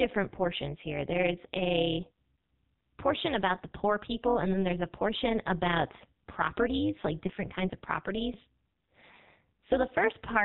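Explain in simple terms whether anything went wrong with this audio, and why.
Two things went wrong, and both last the whole clip.

The first is the AMR narrowband mobile codec, the speech format used on older mobile phone calls. It squeezes the voice into very little data and rebuilds it from a simple model of the throat and mouth. Here nothing above 4 kHz gets through, so the speech sounds dull and boxy. The squeezing is strong enough to hear plainly. The voice comes out buzzy and artificial, like a poor phone line.

The second is overlap-add ripple. The audio was chopped into short, overlapping slices and joined back together. The joins were not blended evenly, so the loudness dips and swells with every slice. That happens about 200 times a second, and each dip is deep. At that speed you do not hear separate pulses. Instead the voice gets a metallic buzz throughout the clip.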